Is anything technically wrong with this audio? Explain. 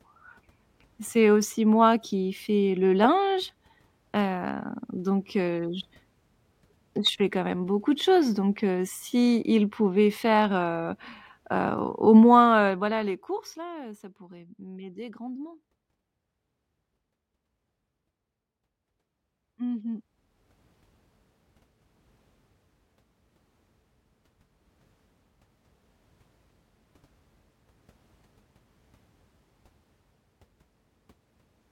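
Yes. Zipper noise occurs from 12.27 to 13.81 s, as the speech level drops by about 15 dB, and from 19.74 to 20.64 s, as it rises by about 15 dB. The gain moves in unsmoothed steps, roughly a hundred per second. Each step clicks, producing a buzzy ticking. The waveform envelope looks staircased, and the spectrogram shows evenly spaced vertical lines.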